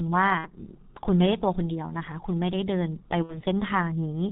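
The whole speech clip carries heavy G.723.1 codec damage. Nothing comes through above 4 kHz. The voice is muffled and hoarse, and consonants smear together. The coarse, slowly updated voice model fits the codec's 6.3 kbit/s mode.

VoIP packet loss concealed by the speech codec appears at 0.38 to 0.51 s and again at 3.23 to 3.39 s. Each gap fits about 60 ms of missing audio, two 30 ms frames. The decoder stretches the last sound into a fading buzzy tone or coloured noise. The voice stays weak briefly after each gap.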